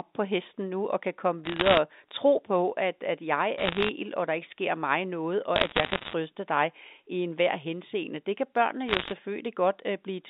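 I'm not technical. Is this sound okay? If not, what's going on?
No. There are bursts of crackle at 1.45 to 1.78, 3.58 to 3.89, 5.56 to 6.13 and 8.88 to 9.12 seconds. These are bit errors on a digital phone line: roughly one bit in a hundred got flipped (a bit fewer in the first burst), and each flip changes one tiny slice of sound, with a flip in an important spot turning it into a sharp tick.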